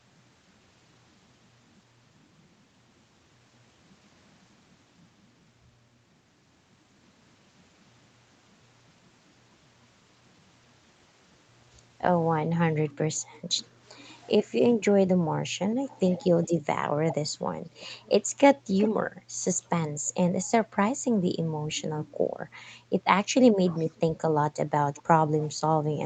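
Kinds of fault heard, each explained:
Echo leak: a delayed copy of the speech, trailing it by about 0.4 s, pops up at 13.2, 15.9, 17.1, 18.8, 20.1, 23.7 and 25.0 s, ranging from barely there to fairly clear; likely a far-end speakerphone whose echo canceller let some pickup through.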